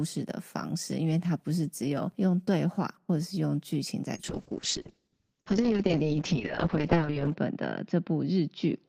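From 4.18 s to the end, the speech turns rough and muffled as treble vanishes above 8 kHz: a call bitrate drop, 32 to 6 kbps, forcing coarser coding.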